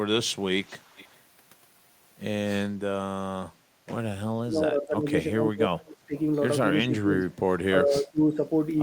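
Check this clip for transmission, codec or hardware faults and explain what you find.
Two faults are audible in this speech clip: an echo leak near the start and repeated speech suppression in double talk during the second half.

Echo leak, 0.64 to 1.19 s: a faint delayed copy of the speech trails it by 332 ms, around 25 dB down. The far end's echo canceller likely let loudspeaker pickup through. A spectrogram shows a weak, time-shifted duplicate of the harmonic pattern.

Speech suppressed in double talk, at 4.42 to 5.07, 5.29 to 6.14, 6.87 to 7.13, 7.31 to 7.35 and 7.82 to 8.39 s: the speech dips or drops out by roughly 15 to 30 dB, deepest around 5.3 to 6.1 s. The echo canceller likely mistook it for echo while both sides spoke. The waveform shows notches in the envelope, and the spectrogram shows faded bands.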